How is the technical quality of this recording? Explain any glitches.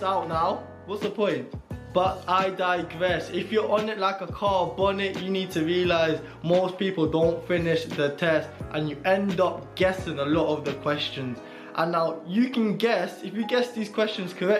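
No dropouts, clicks, distortion or other glitches can be heard anywhere in the recording.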